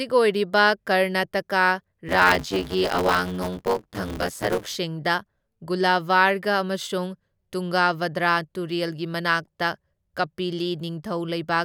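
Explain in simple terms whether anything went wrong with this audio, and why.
Buffer tearing from 2.08 to 4.76 s: the speech picks up a robotic buzz at about 94 Hz, which fits a 512-sample buffer. Playback fell out of step with writing, so roughly half of each chunk replays audio about 20 ms old, with hard joins.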